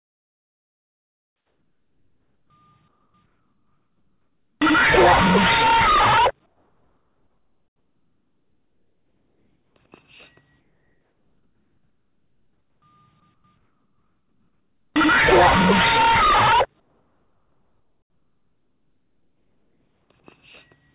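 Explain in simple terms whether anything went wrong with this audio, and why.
In the pauses, the call likely stopped sending the real background and the receiver filled the gaps with comfort noise in place of the background. That steady, blank, quieter hiss covers 0 to 2.5 s, 2.88 to 3.14 s, 3.26 to 4.6 s, 6.46 to 9.76 s, 10.6 to 12.82 s, 13.34 to 13.44 s, 13.58 to 14.94 s and 16.8 to 20.1 s.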